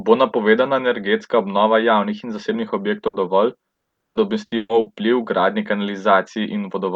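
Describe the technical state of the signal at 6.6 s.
At 6.6 s the speech signal is intact, with no dropout, clipping, glitch or other audible fault.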